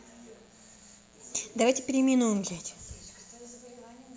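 A mains buzz, with pickup from a 60 Hz supply, runs under this speech clip from start to finish, likely entering through a dimmer, rectifier or unshielded cable. Its spikes, two per cycle, spread harmonics well into the kilohertz range, giving a steady, raspy buzz sitting roughly 35 dB below the speech.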